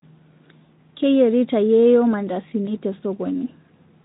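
At 2.65 to 2.69 s, VoIP packet loss concealed by the speech codec: one 20 ms frame goes missing, and the Speex decoder extrapolates from the preceding pitch and filter. A bare dropout would leave silence or a click. Here you hear a brief stretched, fading smear, and the speech sounds weak or distorted just afterward while the decoder's state recovers.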